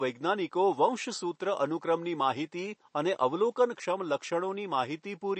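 Speech runs through the whole clip with plainly audible damage throughout. Nothing sounds above 8.3 kHz. The s sounds turn watery and swirl, and attacks smear. That points to MP3 compression as the likely cause, at a low bitrate around 36 kbps. Faint room noise sits about 48 dB below the speech.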